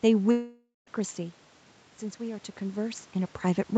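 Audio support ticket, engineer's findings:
Long network dropout, 0.31 to 0.88 s. Sound stops arriving mid-stream. The last fragment is stretched into a buzzy tail that fades, leaving about 0.17 s of near-silence before audio resumes further on. Roughly 0.56 s of material is never heard. Likely cause: burst packet loss on the call path, with receiver concealment extending the final audio until it gives up. Top of band sits near 8 kHz throughout, in line with the codec bandwidth.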